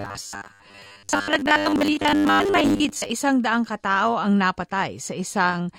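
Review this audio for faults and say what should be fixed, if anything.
From 0.01 to 3.1 s the speech turns into a rigid, metallic buzz locked at 100 Hz, which is classic robotic sound from repeated short buffers. The likely cause is audio arriving too slowly, so the playback side keeps looping the last chunk of about 10 ms. Most of that stretch is repeated material rather than real audio, which is why the speech only roughly survives under the buzz. To prevent it, give the stream a larger jitter buffer or fix whatever is starving the input so fresh audio keeps arriving on time.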